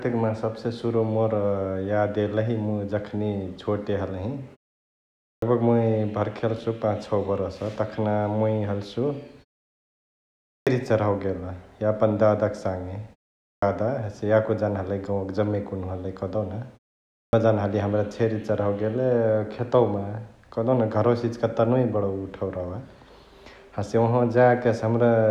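Clipped start after a pause occurs four times: at 5.29 s (about 133 ms lost, after a 0.81 s pause), 10.51 s (157 ms, after 1.15 s), 13.48 s (144 ms, after 0.41 s) and 17.18 s (151 ms, after 0.48 s). Each silence lets the output device drop into a sleep state. When speech resumes, it needs roughly 130 to 160 ms to wake and lock, so each phrase bursts in abruptly with its opening sounds missing.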